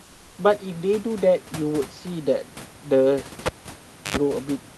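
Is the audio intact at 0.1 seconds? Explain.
No. Comfort noise in place of the background runs from 0.03 to 0.35 s, about 320 ms, covering 0.1 s. The likely cause is discontinuous transmission in the call codec: with no speech detected, the sender goes nearly silent and the receiver fills the gap with synthetic noise matched only roughly to the room. Here the real background, about 30 dB below the loud parts, becomes a smooth, featureless hiss about 2 dB quieter until the sound resumes.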